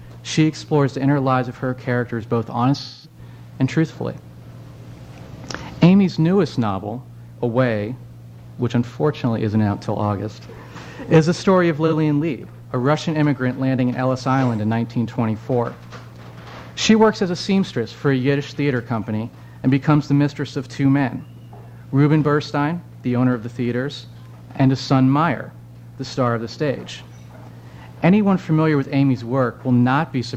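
From 2.83 to 3.19 s the audio turns smeared and noisy, thinning toward a fade before recovering; at 11.87 to 11.94 s there is a much shorter phasey blur. Both are AAC frame loss with concealment. The decoder rebuilt missing frames from the last good spectrum, its energy sagging as the first gap of about 213 ms went on, which points to five lost frames. The brief second patch, about 43 ms, fits a single frame.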